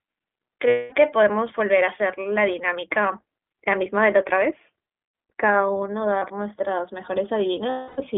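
Throughout, the speech carries the iLBC codec's signature: a narrowband line from roughly 200 Hz to 3.5 kHz with plainly audible roughness and a synthetic edge. Each short frame's excitation is coded independently, at a density that fits the 15.2 kbps mode with 20 ms frames.

At 0.68 to 0.94 s, lost iLBC frames leave a 240 ms gap that the decoder fills by repeating the last pitch cycle mixed with noise, heard as a held, buzzy vowel that fades. A brief 40 ms dropout at 6.18 s and a 280 ms one at 7.70 to 8.01 s are filled the same way, with clean recovery each time.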